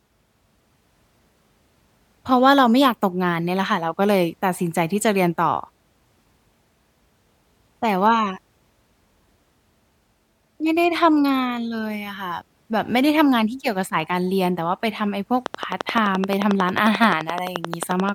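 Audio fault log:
15.46–18.10 s: train of clicks. A steady ticking at about 11.4 clicks per second, around thirty in all, each much the same shape and standing well above the speech. That regular pulse most likely comes from nearby equipment interference or a faulty connection or power supply.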